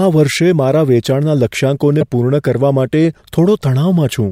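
At 2.01 to 2.03 s, a corrupt frame was decoded. One damaged compressed frame played anyway, misplacing energy across frequencies. It sounds like a brief chirp, squeak, blip or burst of noise.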